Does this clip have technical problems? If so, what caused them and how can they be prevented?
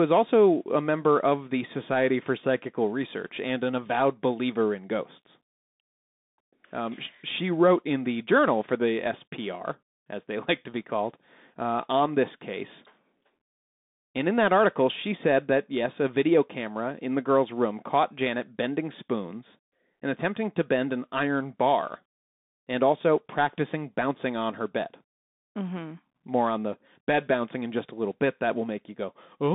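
Yes. Throughout the speech the sound is thin and boxed in, with a band of about 150 Hz to 3.7 kHz and nothing above 3.8 kHz. Its s sounds are scratchy, and a granular hiss sits under it. This is the Bluetooth CVSD headset codec, which sends one bit per sample stating only whether the signal rises or falls, with an adapting step. That fits a 64 kbps link. Fast, loud high-frequency detail outruns the step and distorts. To prevent it, record through a wired microphone or a headset using a wideband codec instead of the hands-free profile.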